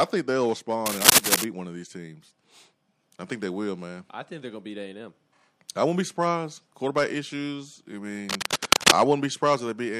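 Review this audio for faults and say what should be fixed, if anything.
Cable scratch noise at 0.86–1.44 s, between "think they'll" and "one of these teams", and at 8.29–8.93 s after "issues I": uneven rustling bursts about 10 dB and 5 dB above the speech, likely from a worn cable or connector whose contact resistance flickered as it moved. Replace or reseat the cable and fix it in place so it cannot shift while recording.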